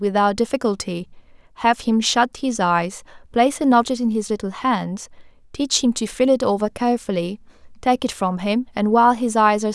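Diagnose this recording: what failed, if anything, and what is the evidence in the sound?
Nothing failed; no fault found.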